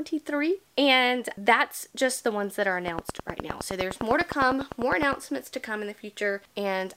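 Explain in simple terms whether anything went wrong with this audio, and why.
A train of clicks runs from 2.88 to 5.14 s: about twenty evenly spaced ticks, roughly ten per second, likely from interference or a faulty connection.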